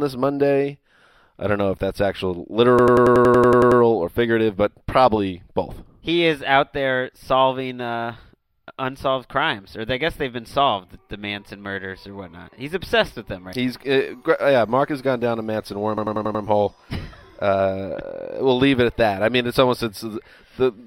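System hang loops at 2.79 to 3.81 s and 15.98 to 16.44 s: playback froze while a 93 ms segment, which fits a 4096-sample buffer, repeated about 10.8 times per second, giving a machine-gun stutter.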